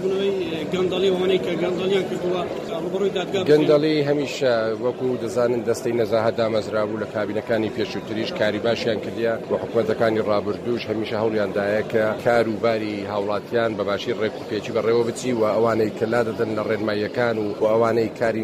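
No technical faults can be heard in this audio.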